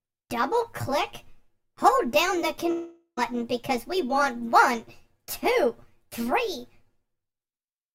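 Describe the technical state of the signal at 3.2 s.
At 3.2 s the signal is just resuming after a gap from 2.71 to 3.19 s, likely a long network dropout. About 460 ms of audio is missing. The last sound is stretched into a fading buzz, then about 80 ms of silence, before audio returns without the lost part.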